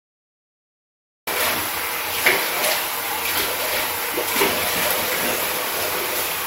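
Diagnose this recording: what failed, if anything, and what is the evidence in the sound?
A cut-off start at the capture or storage stage. Digital silence runs to 1.27 s, then sound appears mid-event with no attack. Recording began late.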